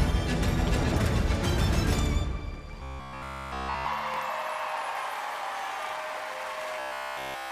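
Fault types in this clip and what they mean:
Robotic sound from repeated short buffers: From 2.83 to 3.87 s, and again from 6.80 s to the end, all of the sound becomes a rigid metallic buzz at 66.7 Hz. This is likely a 15 ms slice looped in place of new audio. Unlike stutter, it is sustained.
Bluetooth stutter: At 4.14 s, one lost packet leaves a 23.2 ms gap that the receiver fills by replaying its last buffer. This gives a brief hiccup before the sound resumes further along. Unlike the robotic passages, it is momentary and sets no lasting pitch.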